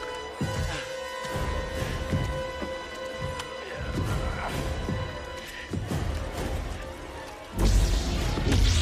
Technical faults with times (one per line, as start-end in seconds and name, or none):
none